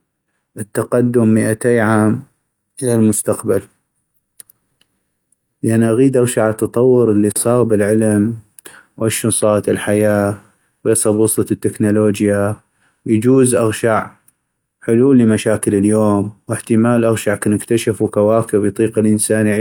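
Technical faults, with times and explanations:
Nothing in this speech recording stands out as a technical problem; there's just nothing to flag here.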